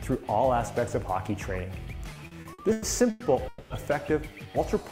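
Between 2.13 and 3.22 s the audio shows repeated stalls (stutter): six short hold-ups, the longest 100 ms, together covering about a third of that stretch. Packets arrived late, so the jitter buffer kept running dry and the receiver stretched the last sound. On a spectrogram these appear as brief horizontally smeared bands, and the waveform shows repeated, slightly decaying copies. A call audio freeze follows from 3.48 to 3.72 s. The sound hangs as a fading buzz or hiss for about 220 ms before resuming where it stopped, likely because packets were held up in transit. It would look like a flat, frozen spectral slice tapering off, with no true silence.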